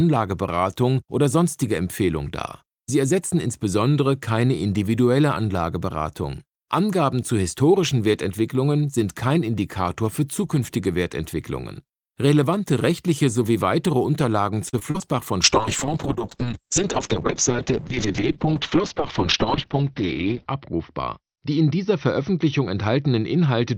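Between 14.69 and 15.02 s, the stream suffers repeated packet loss, giving a robotic sound. Four short holes open in quick succession, the longest about 36 ms, and each is patched by stretching out the sound just before it. About a third of that brief stretch is concealment rather than real audio, so the sound turns choppy, with small pieces missing.

From 15.45 s to the end of the clip, a call bitrate drop sets in. The encoder is forced onto a much smaller bit budget, and the change in the sound fits a fall from around 32 kbps to roughly 7 kbps. It stays at its lowest for about 5 s. The audio bandwidth narrows from 20 kHz to 6 kHz, so the sound loses its top end and becomes muffled, with a rough, watery coding texture.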